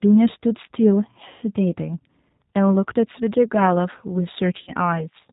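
Speech carried through the G.729 codec for its whole length, with plainly audible damage: a rough, slightly synthetic texture from pulse-based reconstruction, consistent with an 8 kbit/s G.729A stream. On a spectrogram, nothing appears above 4 kHz, and the harmonics look smeared and grainy. VoIP packet loss concealed by the speech codec appears twice. From 1.28 to 1.45 s, about 140 ms of audio was lost. The decoder extends its last pitch and filter into a fading sound, shown as a shrinking waveform envelope. From 4.57 to 4.70 s, gaps totalling 70 ms, the longest 50 ms, are scattered over 100 ms, leaving the voice weak or distorted.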